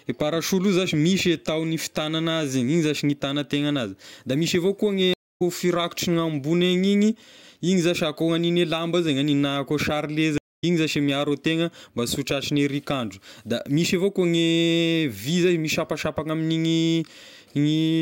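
At 5.14 s and again at 10.38 s, right after "koa sarle", the speech hits a stream reconnect: the connection drops, about a quarter second of silence follows, and the new decoder picks up roughly a fifth of a second further on, so a little speech is skipped.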